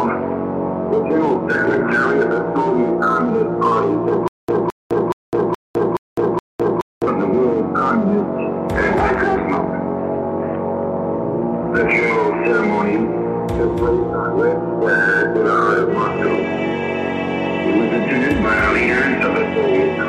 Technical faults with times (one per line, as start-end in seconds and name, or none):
4.28-7.07 stutter with silent gaps